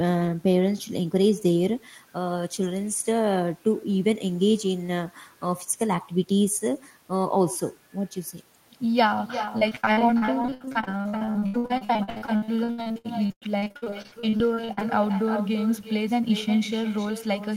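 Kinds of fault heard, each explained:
Channel delay (comb filtering): one channel arrives around a millisecond and a half behind the other. Summing them to mono cancels shared content at evenly spaced frequencies starting near 400 Hz, giving the speech a hollow, phasey colour throughout.
Echo with no canceller: the far end's loudspeaker output is picked up by its microphone and sent back with nothing removing it. Every phrase is shadowed roughly 0.4 s later by a thinner copy about 12 dB below the speech, for the whole clip.
Repeated packet loss (robotic sound): from 9.45 s to 14.83 s, dozens of short gaps, the longest 98 ms, are patched by extending the preceding sound. With 41% of that stretch concealed, the speech turns choppy, with pieces missing.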